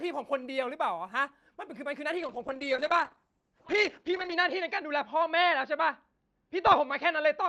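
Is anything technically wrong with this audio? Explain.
Yes. A call bitrate drop begins at 2.19 s and lasts to the end of the clip. The call's bandwidth estimate fell and the encoder was pushed to spend far fewer bits, which fits a fall from about 32 kbps to 8 kbps. Coding becomes coarse, and the audio band narrows from 12 kHz to 8 kHz. The speech turns rough and muffled, losing its upper detail, and is at its worst for about 2.15 s.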